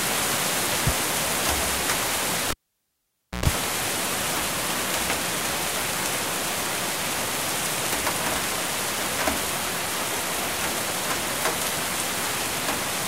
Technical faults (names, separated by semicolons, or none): compressed frames skipped; cable pulled and plugged in